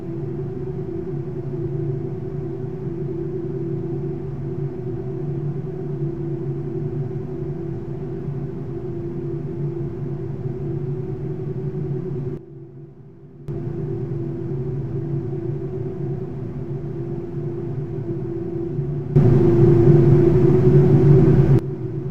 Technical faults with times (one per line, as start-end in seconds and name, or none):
12.37-13.48 sudden gain jump
19.16-21.59 sudden gain jump